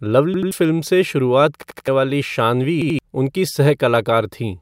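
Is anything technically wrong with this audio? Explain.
Yes. A repeated buffer occurs at 0.34–0.51 s (just before "फ़िल्म से शुरुआत"), 1.62–1.88 s (just after it) and 2.82–2.99 s. The same 85 ms chunk replays two, three and two extra times, which fits a 4096-sample buffer. The result is a hard-edged stutter, and roughly 150 ms, 300 ms and 150 ms of speech are lost. On a spectrogram or waveform, identical blocks repeat with abrupt vertical seams at each join.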